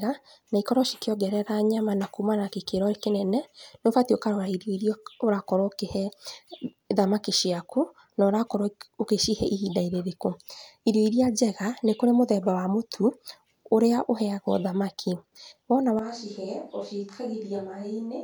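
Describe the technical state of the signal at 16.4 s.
At 16.4 s the sound is in a switch to a distant microphone. It starts at 15.99 s, right after "thamaki wona", and lasts to the end at 18.24 s. The speech suddenly turns roomy and hollow, with thinner bass. The level falls by about 10 dB. Background noise rises to around 35 dB below the speech. The close microphone's signal likely dropped out, leaving a pickup much further from the talker.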